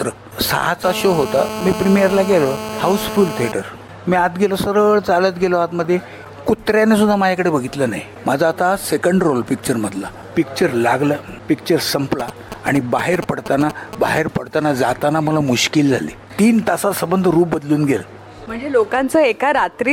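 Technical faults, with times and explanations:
0.84–3.52 s: GSM phone buzz. A hard, raspy 217 Hz buzz rich in harmonics sits about 8 dB below the signal and runs steadily. This points to a nearby 2G phone in a call whose radio bursts are rectified by the audio circuit. Unlike signalling bursts, it never breaks into a rhythm.
12.2–14.19 s: GSM signalling bursts. A galloping dit-dit-dit of short 217 Hz buzzes, roughly 10 dB below the signal, comes from a nearby 2G phone sending brief groups of bursts. This is rectified signalling traffic. It comes in clusters, where the call buzz is continuous.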